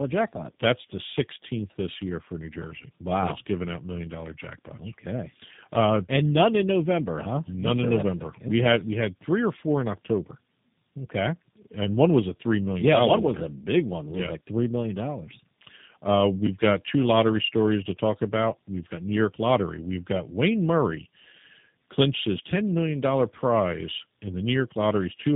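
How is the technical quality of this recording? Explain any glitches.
The quality is poor throughout, because of tandem speech coding. For the full 25 seconds the speech has been through two low-bitrate speech coders in a row, which fits a mobile AMR-type leg feeding a G.729-type leg. Each coder re-models the previous one's errors, so the speech sounds rougher, more muffled and more warbly than one codec alone. Nothing above 3.8 kHz survives, but that cutoff alone would only sound thin, not gritty.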